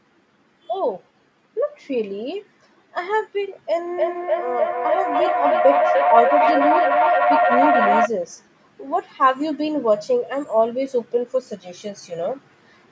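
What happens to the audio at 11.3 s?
At 11.3 s the speech is intact, with nothing breaking up, dropping out or distorting at that point.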